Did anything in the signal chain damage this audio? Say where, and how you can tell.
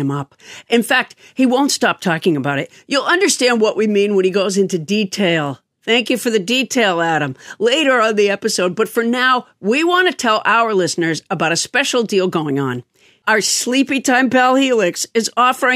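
No, nothing along the chain has left a mark on this one; it's just the recorded speech, with no damage I can point to at any stage.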